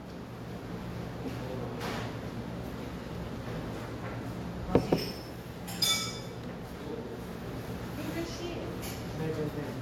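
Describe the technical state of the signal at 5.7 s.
At 5.7 s the signal shows transcoding between lossy codecs, present across the whole clip. The audio was likely encoded with HE-AAC, then re-encoded with Vorbis, which fits roughly 48 kbit/s and 61 kbit/s stages. The second encoder spends bits on the first encoder's artefacts while adding its own artefacts, so both layers are heard together. Nothing remains above 16.6 kHz.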